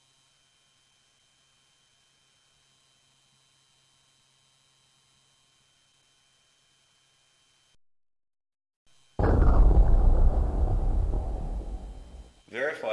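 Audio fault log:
Nothing to log here; every part of the audio came through without a single fault turning up along the way.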